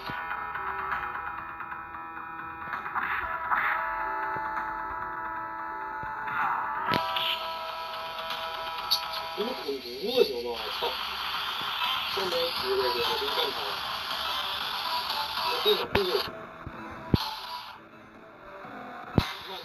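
Throughout the clip there is imaging from linear upsampling. The band limit points to a 16 kHz source raised to 48 kHz by straight-line interpolation. The top end is dulled, and a mirrored copy sits between 8 and 16 kHz, roughly 25 dB down, giving a faint metallic shimmer.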